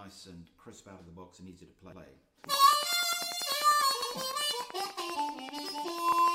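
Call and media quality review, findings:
Overlapping chunks: stutter at 1.92–2.02 s, 4.02–4.12 s and 6.12–6.22 s, 2 s apart. Chunking stage starts each 2 s block 100 ms early, so 100 ms replays at every join. Waveform shows the same segment twice; spectrogram shows duplicated patterns at a seam.

Train of clicks: regular ticking from 2.44 s to the end, 10.2 clicks per second, peaks about 5 dB above the signal, audible in pauses too. Likely interference, a faulty connection or a power supply fault injecting pulses. Spectrogram shows evenly spaced vertical lines; waveform shows similar spikes.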